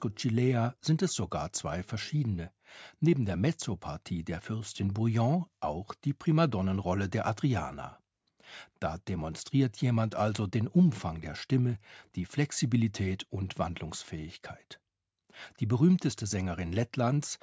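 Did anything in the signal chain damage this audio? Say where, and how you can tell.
No, nothing in the signal chain damaged this speech. It has clearly passed through a call's microphone processing, with the lowest bass trimmed and nothing above 8 kHz, as that path normally behaves.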